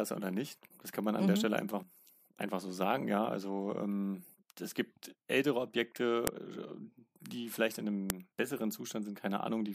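At 6.27 s a sharp, loud click snaps through the speech. This is a file header played as audio. Header bytes from a joined WAV piece were decoded as samples. At 8.10 s, right after "vielleicht in", the same snap marks the next piece's start.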